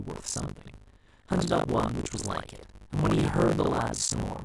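Buffer tearing runs through this speech clip: the writing program and the playback hardware have slipped on the ring buffer, so a bit under half of each 20 ms period replays audio from roughly 70 ms earlier, with hard joins, giving a steady robotic 50 Hz buzz whenever speech is present.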